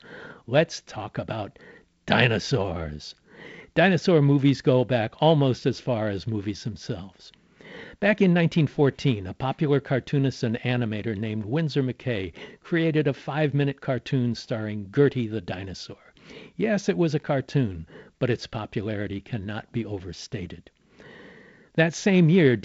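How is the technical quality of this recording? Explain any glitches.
No glitches or faults can be heard anywhere here.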